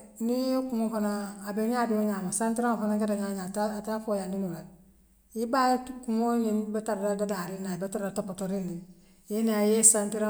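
No technical faults can be heard at any point in the recording.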